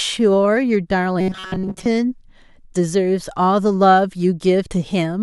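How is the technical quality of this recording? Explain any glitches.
There is one glitch. From 1.21 to 1.86 s the speech turns into a rigid, metallic buzz at about 188 Hz, robotic sound from repeated short buffers, likely caused by replaying a roughly 5 ms buffer while most incoming audio was skipped.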